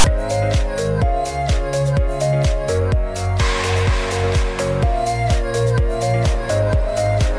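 Right at the top, from 0.00 to 0.04 s, you get file tags played as audio: a block of text metadata got decoded as if it were samples. That's the loud, lopsided rasp, a hard-edged burst of static sitting off-centre before the real sound starts.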